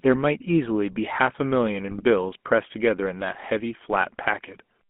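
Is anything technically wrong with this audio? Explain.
Yes. The whole clip has that buzzy, gravelly GSM full-rate codec sound, fitting 13 kbps coding: coarse pulse excitation, band limited to roughly 200 Hz–3.4 kHz, plainly audible throughout.

Then from 1.88 to 2.03 s there's a burst of GSM bit errors. Corrupted filter, pitch or gain values garble those frames into squawks and gargling.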